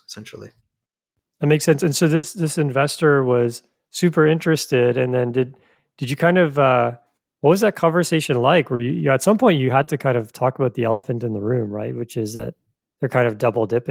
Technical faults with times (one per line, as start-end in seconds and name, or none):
2.15-2.26 burst of packet loss
8.75-8.82 short concealed packet loss
9.83-9.90 short concealed packet loss
10.91-11.06 burst of packet loss
12.35-12.42 short concealed packet loss